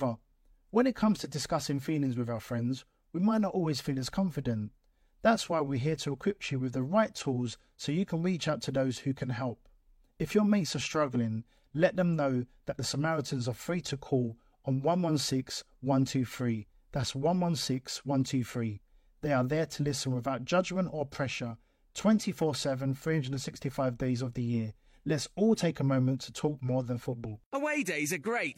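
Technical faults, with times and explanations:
Nothing stood out as a technical problem on listening to this speech recording.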